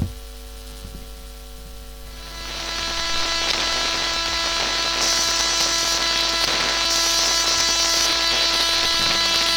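Hard clipping runs through the whole clip: the signal was driven about 8 dB past what one stage could pass, so its loudest peaks are sliced flat. Only around one percent of the audio actually hits the ceiling, which is why the damage comes as brief, gritty crackle on peaks rather than constant fuzz. Unlike soft saturation, which rounds peaks gently, the flat tops spray harsh high harmonics, giving each overload a sharp, brittle edge.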